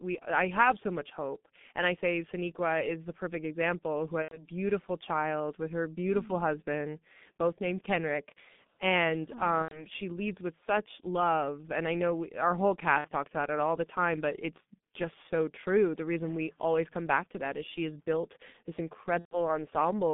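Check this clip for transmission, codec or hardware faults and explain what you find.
Two faults are present: heavy G.723.1 codec coding for the whole clip, and four short gaps of VoIP packet loss concealed by the speech codec.

G.723.1 codec, throughout: the speech is squeezed into a telephone band of about 150 Hz to 3.6 kHz at 6.3 kbit/s, with a slowly updated vocal model. The result is muffled, hoarse speech with smeared consonants and heavy coding damage.

VoIP packet loss concealed by the speech codec, at 4.22 to 4.44 s, 9.62 to 9.86 s (just before "she leads with such"), 12.98 to 13.08 s (between "know we our whole" and "talks about it all"), and 19.19 to 19.42 s (after "she has built this"). About 90, 90, 60 and 120 ms of audio went missing, which fits two to four lost 30 ms frames. The decoder filled each gap by repeating its last pitch and filter at falling gain, so the speech smears into a fading buzzy tone or coloured noise and sounds weak or distorted briefly afterwards.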